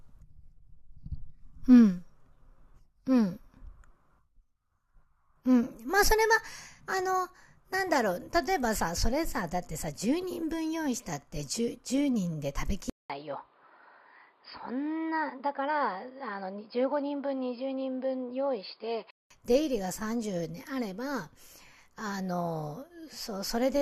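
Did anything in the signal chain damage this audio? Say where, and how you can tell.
Yes. From 12.90 to 19.31 s, after a 200 ms gap, speech is cut above 5.1 kHz and gains faint background noise. The input likely switched to a poorer device.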